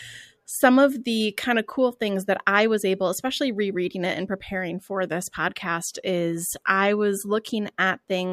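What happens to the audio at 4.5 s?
Nothing goes wrong at 4.5 s; the speech runs on intact through that moment.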